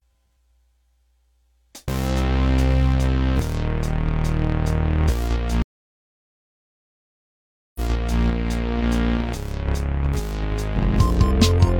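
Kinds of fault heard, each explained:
Stream reconnect: at 5.62 s the connection drops and the music falls silent for 2.13 s, then a fresh decoder resumes 0.46 s earlier, replaying resent material.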